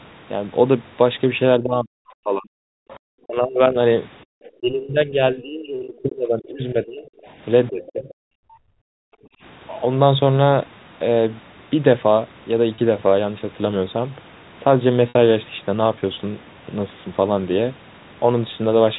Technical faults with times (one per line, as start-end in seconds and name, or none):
1.58-8.08 speech suppressed in double talk
2.82-2.89 background gated by the echo canceller
2.89-2.99 other side's voice leaking through
4.25-4.31 background gated by the echo canceller
7.22-7.91 other side's voice leaking through
8.36-9.41 background gated by the echo canceller
12.75-12.78 packet loss with pitch repetition
15.09-15.15 packet loss with pitch repetition